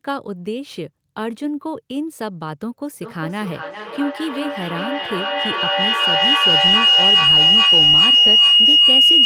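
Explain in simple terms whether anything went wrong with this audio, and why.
A feedback howl starts at 2.94 s and runs to the end. Two devices in the room were feeding each other, so the sound kept re-entering and growing louder each trip, narrowing to a shrill tone around 3 kHz that pulses roughly every 0.4 seconds.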